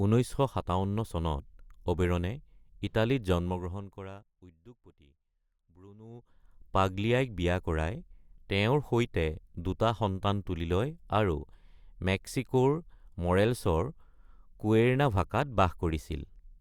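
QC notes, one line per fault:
3.30 to 4.67 s, zipper noise: the level falls by roughly 25 dB in coarse unsmoothed steps, around 200 a second, and each jump leaves a tiny click, so a fine ticking buzz rides on the speech while the level sinks.
5.98 to 6.51 s, zipper noise: the same stepped gain brings the level back up by roughly 25 dB, again zipping at about 200 clicks a second until it settles.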